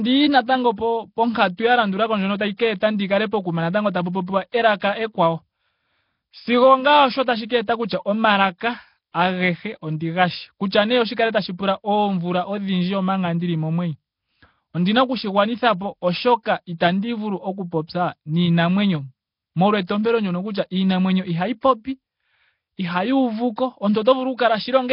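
A speech recording whose whole length carries a rough, hissy halo and a smeared, underwater character, with nothing above 5.3 kHz. This is most likely Nellymoser compression, the old Flash microphone codec, under heavy strain at a rate that fits roughly 22 kbps. Its fixed bit budget starves weaker bands, which get replaced with noise. On a spectrogram, the content stops at a hard ceiling near 5.3 kHz, and the speech harmonics below it look blurred and patchy, filled in with grainy noise rather than clean lines. Right after "pokuma natanggo tapu popiwa", at 4.52 s, a sharp onset is preceded by a brief smear of hiss, a pre-echo about 16 ms long. The codec spreads the quantisation noise meant for the loud attack across its whole block, so the quiet moment before it fills with noise and the attack itself sounds softened. On a waveform, a fuzzy patch of noise leads into the transient, and on a spectrogram a thin broadband haze appears just ahead of it.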